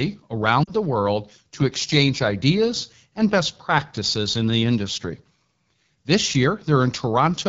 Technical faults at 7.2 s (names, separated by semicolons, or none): AMR wideband (HD Voice) codec